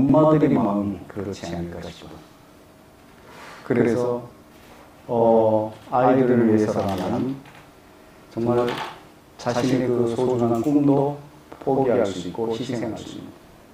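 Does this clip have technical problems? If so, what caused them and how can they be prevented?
Yes. Channel delay (doubling) runs throughout the clip: one channel arrives about 92.9 ms late, which fits a 4096-sample buffer, and when both are summed to mono every onset is followed by a second copy at equal strength, heard as a slap echo. On a waveform each transient appears twice, a fixed 93 ms apart. A spectrogram shows onsets duplicated horizontally. Keep both channels on a shared, aligned buffer path before any mono fold-down.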